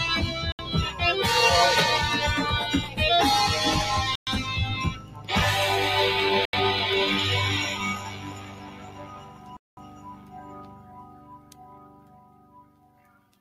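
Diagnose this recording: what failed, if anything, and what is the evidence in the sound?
The call-processing stage is at fault: a noise suppressor tuned for speech stays active across the whole clip and treats sustained content and ambience as noise. Level swings of around 15 dB follow the material rather than any fader, so held portions and decays pump and thin while transients pass largely intact. A fixed-threshold gate would chop cleanly open and shut. This gain rides continuously and depends on frequency.

The playback path drops out completely four times: 0.52 to 0.59 s (69 ms), 4.15 to 4.27 s (115 ms), 6.45 to 6.53 s (81 ms) and 9.57 to 9.77 s (204 ms). Each gap drops to silence, and the sound then picks up where it stopped. These are likely Bluetooth stalls, where the headphone buffer ran dry while retransmitted packets were delayed. Unlike suppressor dips, these cut to nothing, not to a lowered level.

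In two stretches the suppressor pulls specific sound down harder than its general behaviour: 4.93 to 5.29 s, and from 7.99 s to the end, roughly five seconds affected. The drop reaches about 8 dB, and steady or fading components sink and lose their tails while onsets survive. This is sound cut by the noise suppressor, a content-dependent attenuation. A network stall would instead leave a silent hole with a clean resume.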